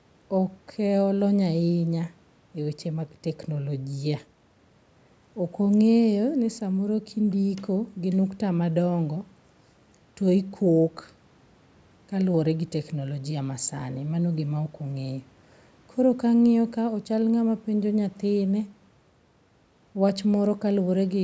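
Nothing goes wrong anywhere in this speech; it just sounds like it came through a call's microphone processing, with the lowest bass trimmed and nothing above 8 kHz, which is exactly what that path does.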